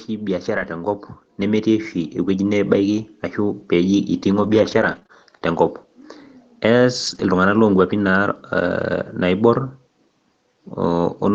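From 0.06 s to 2.8 s the level climbs steadily, about 9 dB in all. This is automatic gain rising: the gain control judged the input too quiet and raised its gain gradually, so speech and background noise swell together. On a waveform the envelope widens smoothly across those few seconds. On a spectrogram the whole picture, including the noise floor between syllables, brightens evenly.

Inside that rise, from 0.55 s to 0.65 s, is a lost packet rebuilt from error correction. There is no gap. About 60 ms of audio, which fits three lost packets, was replaced by the low-bitrate backup copies carried in the following Opus packets. That stretch sounds briefly rougher and grainier. A spectrogram shows a short smeared, noisier patch with blurred harmonics, but the band still reaches the call's 8 kHz limit.

From 4.43 s to 5.11 s there is repeated packet loss with a robotic sound. Three separate holes hit this span, and each was patched by stretching the last sound. 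About 54 ms was filled this way and roughly 60 ms was missing, the longest hole being 22 ms. The result is choppy and robotic. A waveform shows small notches and repeated cycles. A spectrogram shows flattened, frozen harmonic bands with breaks in them.

At 7.07 s to 7.21 s the same error-correction rebuild returns over 80 ms, probably four packets. It again produces a brief coarse, noisy blur with no silence.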